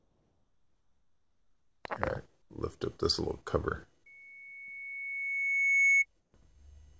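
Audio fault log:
0.00–1.84 s, 2.42–2.50 s, 6.20–6.34 s: comfort noise in place of the background. In these pauses the faint background becomes a flat, featureless hiss, about 2 dB quieter, and about 8 dB quieter in the short middle gap. The likely cause is discontinuous transmission: the sender falls silent and the receiver fills the gap with synthetic noise.
4.06–6.06 s: loudspeaker feedback squeal. A single tone at 2.2 kHz swells over about two seconds until it stands roughly 10 dB above the sound. A microphone is picking up its own loudspeaker, and the loop gain at that frequency exceeds one, so the tone keeps growing.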